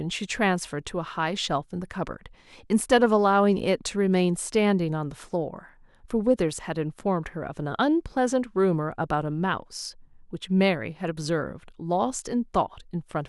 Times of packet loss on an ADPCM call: none

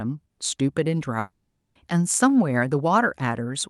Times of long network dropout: 1.19-1.77

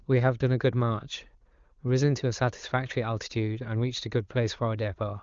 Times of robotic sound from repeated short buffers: none

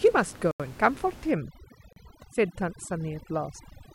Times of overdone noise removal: 1.31-3.94

